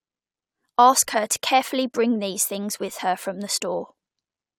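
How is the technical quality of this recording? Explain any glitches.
No glitches can be heard anywhere in the recording, and the signal holds steady without any dropouts, distortion or timing disturbances.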